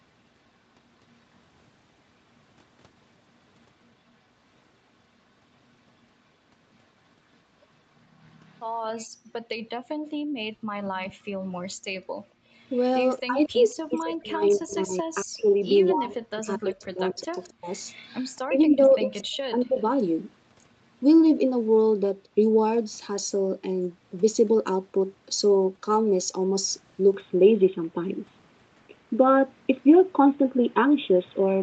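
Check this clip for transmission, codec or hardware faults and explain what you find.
Three echo-canceller faults stand out in this speech, and the top end stopping at 8 kHz simply reflects the Opus call path's bandwidth.

Echo leak, 8.24–8.62 s, 12.71–14.57 s and 15.86–19.82 s: a faint copy of the speech trails about 230 ms behind, roughly 35 dB down, nearer 30 dB in the last stretch. It is likely the far-end loudspeaker's sound escaping an incomplete echo canceller.

Background gated by the echo canceller, 9.16–11.86 s: the room tone drops out by up to about 40 dB, around a second in total, because the canceller clamps the microphone while the loudspeaker plays.

Speech suppressed in double talk, 13.27–19.79 s: the talker's speech dips by up to roughly 30 dB for about four seconds in total, likely because the canceller attenuated everything while both sides spoke together.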